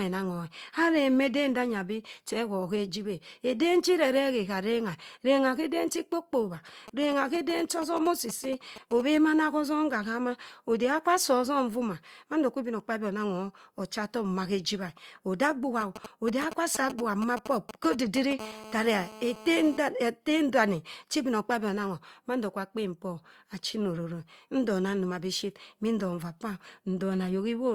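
A nearby 2G phone's signalling transmissions are rectified by the audio circuit from 6.88 to 9.02 s and again from 15.81 to 18.33 s. These GSM signalling bursts come through as galloping dit-dit-dit ticks and short 217 Hz buzzes, roughly 15 dB and then 10 dB below the speech. From 18.39 to 19.77 s, the phone's steady call-mode bursts at 217 Hz produce GSM phone buzz, a hard, raspy drone about 16 dB below the speech.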